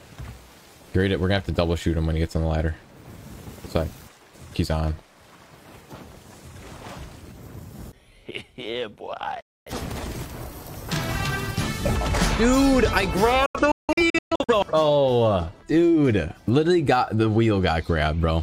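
The receiver lost its digital signal or got frames that failed their checks twice, a digital broadcast dropout, muting within about 3 ms each time. At 9.41 s the audio cuts for roughly a quarter second. From 13.46 to 14.54 s it breaks into several short holes, the longest about 170 ms, and the missing material never returns.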